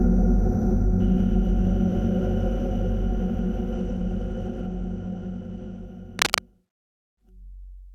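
A recording of everyday sounds opens with channel delay (comb filtering): from 0.0 to 1.0 s one channel runs a fraction of a millisecond behind the other, and summing to mono cancels shared content at evenly spaced frequencies. The first notch falls around 3 kHz, so the sound turns hollow and phasey. From 3.72 to 5.85 s a Bluetooth SBC bit pool drop sets in, pointing to a congested link where the encoder fell back from a bit pool of 28 to 14, near 108 kbps. Starved of bits, the upper sub-bands lose detail while coarse quantisation adds grit, dulling the treble until the rate recovers. Cable scratch noise follows from 6.19 to 6.4 s: a dense, uneven burst of rustling noise roughly as loud as the sound itself sits on top of it, likely from a worn cable or connector being moved so its contact resistance jumped rapidly.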